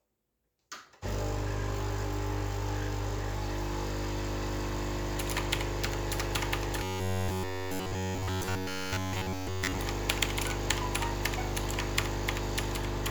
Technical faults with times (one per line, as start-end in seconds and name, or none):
6.83-9.79 robotic sound from repeated short buffers